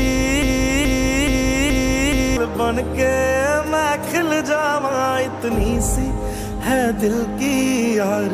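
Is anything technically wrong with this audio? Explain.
Yes. From the very start until about 2.37 s there's a broken-record loop: a 0.43 s fragment repeats back to back, five times, already going when the clip opens. Likely the player or stream stalled and kept resending its last chunk, so the audio meant for that stretch is gone.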